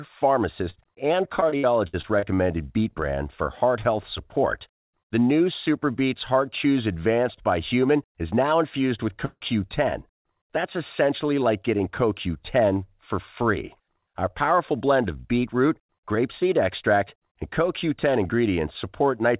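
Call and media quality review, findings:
Short concealed packet loss, 0.70–0.76 s and 10.21–10.27 s. Brief smear/wobble, each about 40 ms of audio missing. Jitter buffer/decoder concealment extended the last sound from its pitch or as shaped noise, then crossfaded back. Path band-limited to 4 kHz, consistent with G.711 mu-law at 64 kbps.

Repeated packet loss (robotic sound), 1.40–2.39 s. Choppy audio with pieces missing: seven gaps, longest 61 ms, roughly 22% of the span synthesized. Receiver concealment patched each hole from prior audio before the next loss arrived, producing the robotic texture.

Long network dropout, 9.25–9.43 s. Fading buzz/hiss about 150 ms long, then about 30 ms of silence before audio resumes with the gap content missing. Likely a network outage: the decoder concealed from the last frame, decayed, then muted.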